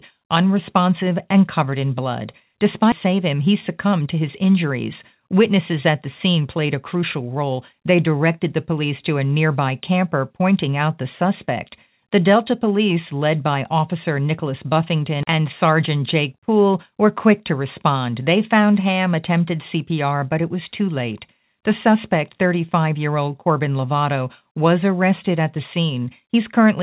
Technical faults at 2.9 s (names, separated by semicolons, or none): skip ahead